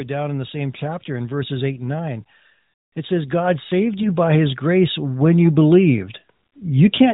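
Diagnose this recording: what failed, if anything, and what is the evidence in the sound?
Automatic gain rising in the call-processing stage: from 0.08 s to 7.08 s the level climbs steadily by about 14 dB, with voice and background noise swelling together. The control loop judged the input too quiet and kept raising its gain. A fader move or a louder talker would not lift the noise floor in step, and a compressor releasing would recover quickly rather than creep upward across nearly the whole clip.

Lost AMR speech frames in the network and codec path: between 4.02 s and 4.16 s the speech dips or briefly warbles, then returns weak or rough for a moment. The decoder received a frame that failed its check, repeated the last good pitch and vocal-tract settings at reduced gain, and then recovered. The short dip fits a single lost 20 ms frame. A dropout in a buffer or driver would give a hard gap or click instead of this smeared, synthetic fill. 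The band-limited narrowband codec sound is audible throughout.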